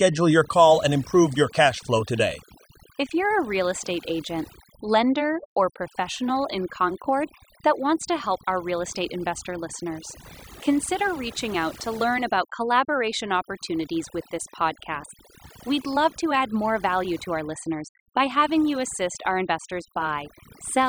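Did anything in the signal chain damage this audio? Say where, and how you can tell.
Yes. Overdone noise removal runs through the whole speech clip, introduced where a noise reduction tool was set far too aggressively. Between phrases the background drops to near silence sprinkled with twinkling, chirpy specks. That happens because the suppressor mutes individual frequency bands whenever their level sits close to its noise estimate, so the quieter parts of the speech are cut out along with the noise.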